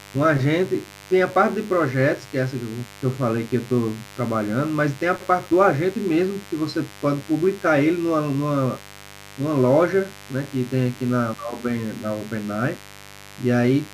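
A mains buzz runs through the speech from start to finish. It sits on a 50 Hz mains supply. Sharp switching spikes get into the signal path twice per cycle, so the interference repeats at 100 Hz. Its harmonics stack up from 50 Hz into several kHz. That spread gives a raspy, edgy buzz rather than a smooth hum. The level stays steady, roughly 20 dB below the speech.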